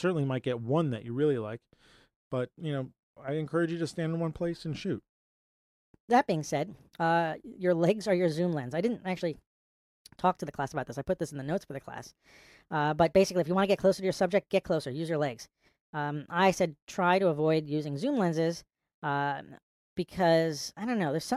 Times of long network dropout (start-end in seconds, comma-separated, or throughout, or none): none